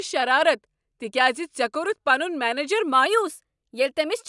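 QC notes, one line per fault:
3.06 to 4.28 s, wrong sample rate: the final stretch of speech plays about 9% fast and 1.5 semitones high. This fits 22 kHz audio played at 24 kHz.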